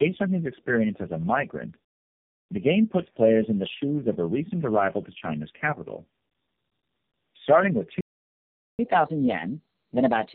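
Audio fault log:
throughout – tandem speech coding: the sound is muffled, rough and warbly. The compounded smearing points to three low-rate speech coders in sequence, each re-encoding the previous coder's damaged output. A single codec would sound cleaner.
8.01–8.79 s – playback stall: the sound stops dead for about 0.78 s and then resumes. The player likely ran out of buffered data or was blocked. This is a clean gap, not crackle or a brief concealed dropout like packet loss.
8.79 s to the end – catch-up at higher speed: the audio plays 1.15 times faster and sits about two semitones higher as the player works through its backlog to recover lost time. Speed and pitch rise together, so this is not a pitch shift alone.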